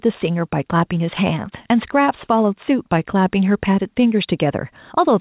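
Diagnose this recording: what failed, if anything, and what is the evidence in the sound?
Gain pumping runs through the whole clip. The level swings by roughly 5 dB, and loud and soft syllables sit squashed close together. The likely cause is input gain set far too high, with a fast limiter or compressor clamping down on each peak and letting go in the pauses. All of this comes through a telephone-style band that stops at 4 kHz, which fits a G.711 call codec.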